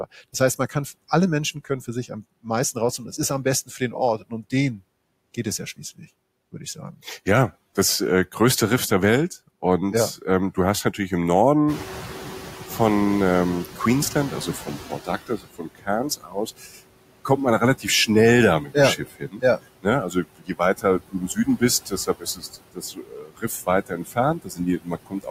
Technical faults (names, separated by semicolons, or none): noise suppressor artifacts; speech cut by the noise suppressor; noise suppressor catching up